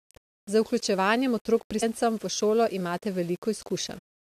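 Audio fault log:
Throughout: low bit depth without dither. The speech sounds grainy, with a gritty distortion that tracks the signal and gets worse as the level falls. Quiet syllable tails and pauses crumble into a sputter or drop out to silence. The likely cause is rounding to roughly 7 bits with no dither, which leaves the error only about 30 dB below the signal. On a waveform, low-level passages show visible stair-steps. A spectrogram shows broadband hash that rises and falls with each word and vanishes in silences.
1.81 s and 3.97 s: damaged data in a compressed stream. Each event is a brief squawk or blip. The first falls between "vključevanjem otrok" and "v šolo", and the second comes near the end. Corrupt bytes make the decoder misread a frame, lose sync and skip to the next header. On the spectrogram, each shows as a thin vertical smear of unrelated energy about 20 ms wide. The waveform shows an abrupt discontinuity at the same point.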